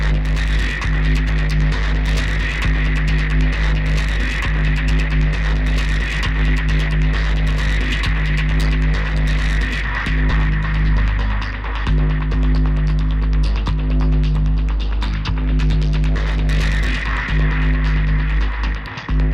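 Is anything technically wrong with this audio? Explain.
No, nothing technically wrong here.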